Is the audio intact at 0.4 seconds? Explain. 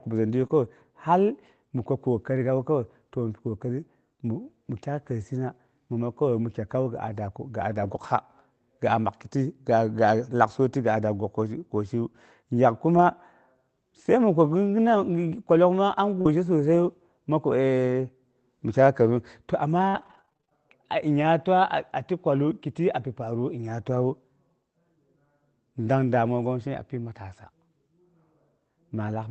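No. From 0.39 to 0.45 s there's a lost packet rebuilt from error correction: the lost audio, which fits two packets, was replayed from low-bitrate backup copies, so it sounds rougher and noisier with no gap. Right after, from 0.47 to 0.51 s and just before "hal mi kwa kokari", a short concealed packet loss gets papered over by stretching the preceding sound, leaving a brief smear.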